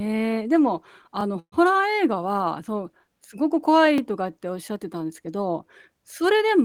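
At 1.21 to 1.23 s, a repeated buffer occurs: a chunk of about 23 ms, which fits a 1024-sample buffer, plays one extra time because fresh audio was late. It is heard as a brief stutter with a hard join, and nothing is skipped.

From 1.39 to 1.54 s, a call audio freeze stretches the last sound into a decaying buzz, with about 70 ms of that going silent. The likely cause is delayed packets draining the jitter buffer. Playback resumes where it stopped, 126 ms later, with no audio missing.

At 3.98 to 4.00 s, the same repeated buffer fault recurs with an identical 23 ms segment played twice, producing another short stutter at a hard edge.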